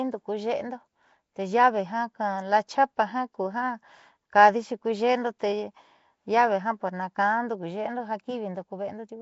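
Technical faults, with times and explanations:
Throughout, Nellymoser compression: the speech carries a rough, hissy halo and a smeared, underwater quality, and nothing is heard above about 7.7 kHz. This is likely the Nellymoser Asao codec once used for Flash microphones, at a rate that fits about 32 kbps. It codes short blocks with a fixed, small bit budget, so quieter frequency bands get no bits and are filled with noise, which causes the hiss and the blurred detail.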